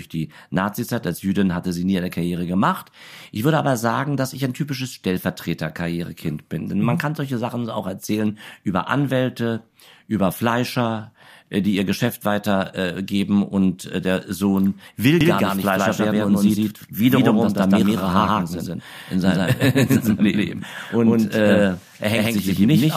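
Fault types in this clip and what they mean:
Doubled audio track: From 15.21 s to the end, the speech is heard twice. A second full-band copy trails by roughly 150 ms at about equal loudness. It starts abruptly, with no decay or room colour. A slower second capture path is the likely cause.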